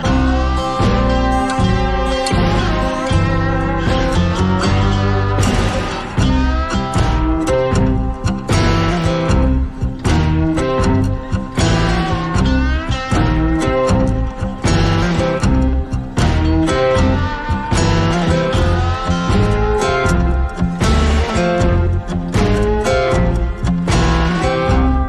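At 9.02 s a bit error spike appears: a bit flipped in memory or on a digital link, throwing three consecutive samples off by a power of two, reaching about -28 dBFS, before snapping back. It sounds like a single sharp tick unrelated to the surrounding sound. The waveform shows a needle-thin excursion, and the spectrogram shows a hairline vertical stripe across all frequencies.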